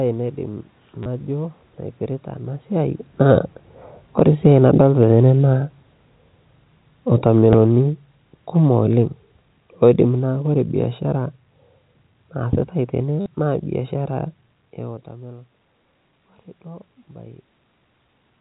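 At 1.03 to 1.06 s there is packet loss with the last packet repeated. About 30 ms of audio went missing, and the receiver filled the gap by replaying the previous packet. The short run has a robotic stutter and a buzz near 100 Hz, which fits 10 ms packets.

From 2.73 s, just after "naipirita ana", the automatic gain is falling. Just before this the talker moves at about 2.5 s, but that is a normal level change. The gain control lowered its gain slowly, by about 12 dB, until 11.35 s. The sound starts loud and then sinks. The room noise sinks with it, which shows the drop comes from the system.

At 7.53 s a single 10 ms packet is lost and repeated. It is heard as a small blip.

At 13.21 to 13.26 s, right after "naasitai tene", packet loss with the last packet repeated returns. This time 50 ms is replaced by repeats. It gives a longer, buzzy stutter than the first one.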